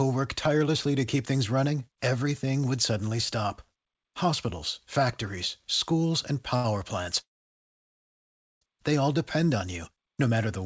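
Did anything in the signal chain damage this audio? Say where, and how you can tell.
Yes, the damage sits at the network and jitter-buffer stage of a call path whose band stops at 8 kHz, which fits a wideband G.722 link.

At 6.56 to 6.67 s there is a short stall from a late packet. One sound is held about 81 ms too long with a slight buzz or dip, then the audio resumes from the same point with nothing lost. On a spectrogram the harmonics run as flat, frozen horizontal streaks for that span. In the waveform a repeated, slightly decaying cycle fills the hole. The receiver ran dry and stretched the last sound while it waited.

From 7.21 to 8.64 s a call audio freeze inserts about 1.4 s of gap. The last sound smears briefly into a fading buzz or hiss, then roughly 1.36 s is silent before the audio picks up exactly where it stopped, with nothing missing. The spectrogram shows a short smeared tail and then a blank column. 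In the waveform that span is flat. The likely cause is packets held up in transit, which emptied the jitter buffer until they arrived.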